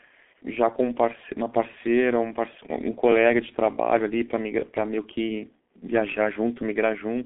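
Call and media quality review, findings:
G.723.1 codec, entire clip: speech muffled and hoarse, consonants smeared. Spectrogram shows a hard ceiling near 3.8 kHz, thin energy below 250 Hz, blurry formants. Heavy damage from 30 ms frames and slow model updates, consistent with a roughly 6 kbit/s stream.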